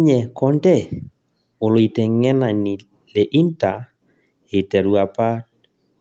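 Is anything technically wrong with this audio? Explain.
No, nothing in this speech is technically wrong. It has the narrowed sound of a call, with nothing above about 8 kHz, which fits a wideband Opus setting around 32 kbps, and the lowest bass is trimmed by the microphone processing.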